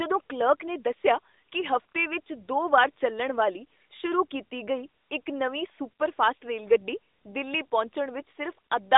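No technical faults turn up anywhere in this speech. It comes through an AMR narrowband mobile codec path, heard as a telephone-style band of roughly 250 Hz to 3.7 kHz with nothing above about 3.8 kHz, and the light coding character fits a rate near 12.2 kbps.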